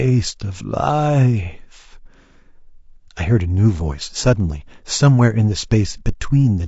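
Throughout, the speech is rough and grainy, likely from low-delay AAC compression near 32 kbps. A spectrogram shows smeared harmonics with noise filling the gaps between them.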